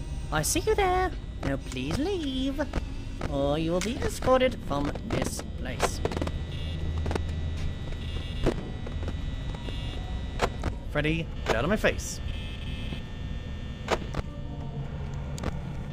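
From 0.0 to 10.87 s the sound runs about 1.09 times fast and roughly 1.5 semitones sharp, a wrong sample rate fitting 44.1 kHz material played at 48 kHz. Pitch and tempo rise together, which a pitch shift or time-stretch would not do.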